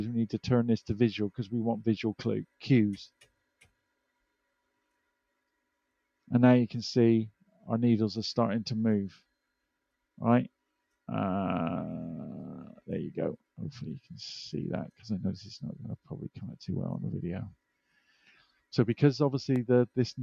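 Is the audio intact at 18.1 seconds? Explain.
No. From 17.98 to 18.44 s the sound sinks in level, dipping by about 8 dB at its deepest, for a fifth of a second or so in all. This is sound cut by the noise suppressor, which mistook it for noise and turned it down.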